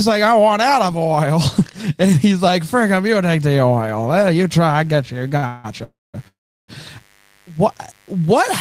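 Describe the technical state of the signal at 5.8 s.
A 50 Hz mains buzz runs from 2.25 s to the end, sitting roughly 40 dB under the speech: a steady, raspy hum from switching spikes twice per mains cycle, rich in harmonics. At 5.84 to 6.16 s there is a call audio freeze: the last sound is stretched into a fading buzz or hiss, then about 210 ms of silence, likely from delayed packets draining the jitter buffer. Speech then resumes where it stopped, about 0.3 s late, with nothing lost.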